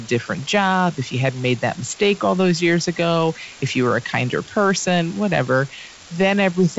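From start to finish, an unreliable data bit adds a steady crackling fizz, even in pauses. One marginal data line flips randomly, producing equal-sized spikes over G.722-coded speech.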